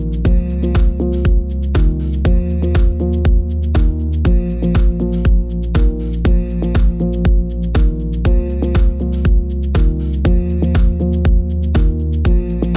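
No technical faults are audible anywhere in this audio.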